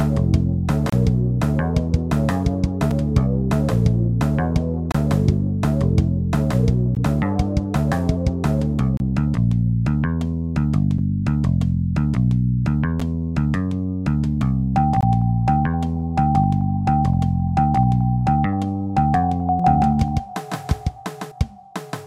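Gaps between stream segments occur at 0.90–0.93, 2.91, 4.92–4.95, 6.95, 8.97–9.00, 10.98, 13.00 and 15.01–15.03 s, one per 2 s segment. Misaligned segment timestamps leave holes that the player fills with silence, causing hard-edged dropouts of roughly 4 to 30 ms without losing any audio.

A doubled audio track runs from 19.6 to 21.3 s. A full-band copy of the sound trails the original by around 150 ms at about the same loudness, with no decay or room colour, and it starts and stops abruptly. This is likely a second, slower capture path mixed back in.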